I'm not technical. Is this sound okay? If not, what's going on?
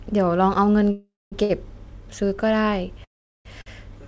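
No. The speech stops and restarts twice, and twice more a sound is briefly held too long.

The two longer breaks are a call audio freeze, likely caused by data packets getting held up on the network. From 0.91 to 1.34 s the last sound carries on as a fading buzz and then goes silent for about a fifth of a second. From 3.04 to 3.47 s nearly the whole break is silence. Each time, the speech then resumes exactly where it stopped, so nothing is lost. It just arrives about 0.4 s late.

The two brief hitches are a short stall from a late packet. At 1.44 to 1.51 s and again at 3.61 to 3.68 s, one piece of sound is stretched for roughly 50 to 60 ms while the next piece catches up, giving a slight buzz or dip. What separates these from the freezes is their size. They last a blink rather than close to half a second, there's no real silence, and they sound like a smeared syllable rather than the call cutting out.

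The dull, slightly muffled tone, with nothing above 8 kHz, comes from the normal call connection this audio went through.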